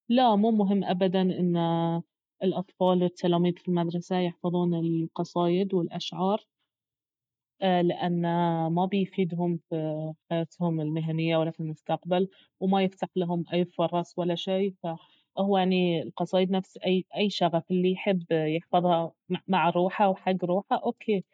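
Nothing technical stands out in this speech recording; there's no fault to point to anywhere along it.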